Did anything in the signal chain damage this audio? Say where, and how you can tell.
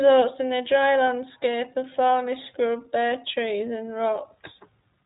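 Yes, at the codec stage: an iLBC codec runs throughout, coding each frame's excitation independently. Nothing passes above 3.8 kHz, and the plainly audible rough, synthetic edge on the speech fits iLBC, here running 20 ms frames at the 15.2 kbps mode.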